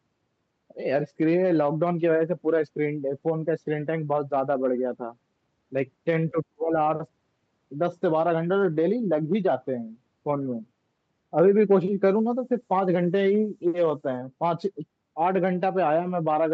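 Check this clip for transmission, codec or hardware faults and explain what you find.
Two faults stand out in this speech clip.

Speech suppressed in double talk, 6.32 to 6.76 s: the speech drops sharply, by around 40 dB at its deepest. This is likely an echo canceller mistaking both talkers for echo and attenuating everything.

Low bit depth with noise shaping, 12.09 to 14.18 s: coarse quantisation, consistent with roughly 9 bits, has its rounding error pushed upward. The result is a thin, steady hiss around 30 dB below the speech, rising toward the 8 kHz top of the call band.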